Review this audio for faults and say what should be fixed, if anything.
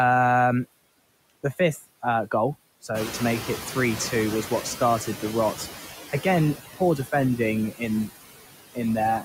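Noise suppressor artifacts run through the whole clip. The suppressor pulls down whatever bands it judges to be steady noise, frame by frame, by about 18 dB. So the background dips between words and swells back under them. To prevent it, back off the suppression depth or smooth the per-band gain over time so the residual doesn't flutter.

Noise suppressor catching up runs from 2.94 to 5.65 s, starting just after "uh goal". The room noise jumps by about 12 dB around 3 s. For roughly 2.7 s the suppressor's estimate lags, cutting only about 9 dB, so the noise comes through with less reduction and then sinks as it adapts. To prevent it, use a faster-tracking noise estimate so sudden level changes get picked up quickly.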